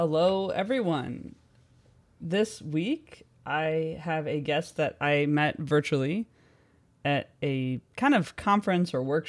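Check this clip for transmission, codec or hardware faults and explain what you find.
Nothing faulty can be heard in this speech recording.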